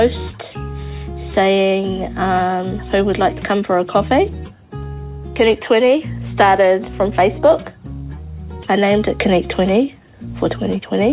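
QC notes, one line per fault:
No faults were found in this clip. The audio has come through a WebRTC call path, and nothing above 4 kHz can be heard, which fits narrowband G.711 mu-law coding at 64 kbps.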